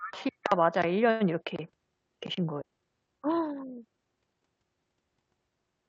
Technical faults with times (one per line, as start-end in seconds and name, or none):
2.61-2.63 skip ahead
2.71-4.42 jitter buffer speed-up